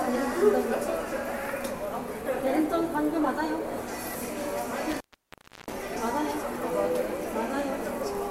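Everyday sound recording with an intermittent contact from 4.91 to 5.74 s: a loose connection opens for about 0.68 s, leaving a near-flat waveform with crackle spikes at both edges and faint broadband hiss.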